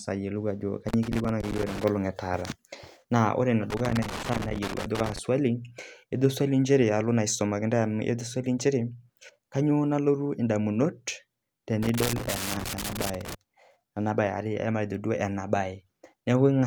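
Irregular bursts of crackle and scratching break up the speech from 0.89 to 1.84 s, 3.70 to 5.19 s and 11.83 to 13.35 s. This is loose connector crackle: a worn or dirty contact rapidly makes and breaks, chopping the signal.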